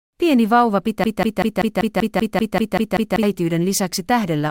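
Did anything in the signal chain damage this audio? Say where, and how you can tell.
Yes. From 1.04 to 3.23 s the speech turns into a broken-record loop: one 0.19 s fragment repeats back to back, eleven times, while the real audio for that stretch is gone. Most likely a player or stream buffer stalled and kept replaying its last chunk.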